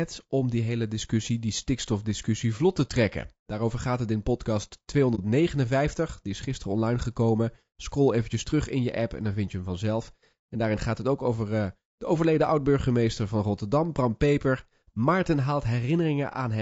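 Throughout, the speech has likely passed through low-delay AAC compression of the AAC-ELD kind used for video calls, at a rate that sounds close to 32 kbps. Its short frames separate the voice's harmonics poorly at that rate, so the voice sounds plainly rough and grainy, with noise filling the gaps between harmonics.

From 5.15 to 5.20 s, just after "gaat het in podcast", there is AAC frame loss with muting. The decoder received nothing for a stretch that fits a single lost frame and zeroed its spectrum, and the overlapping windows turn this into a brief dip.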